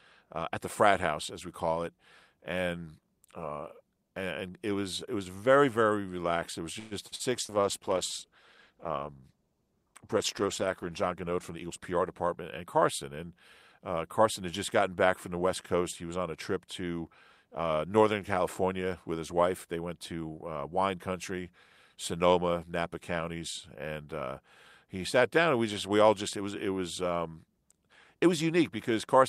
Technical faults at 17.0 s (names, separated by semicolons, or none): none